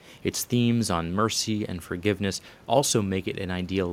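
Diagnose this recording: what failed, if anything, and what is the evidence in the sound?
Nothing in this recording failed.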